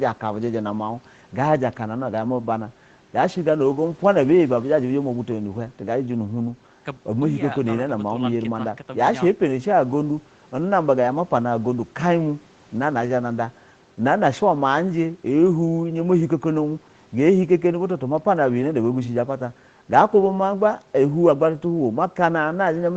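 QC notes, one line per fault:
No fault found in the speech, so there is no line per fault to give.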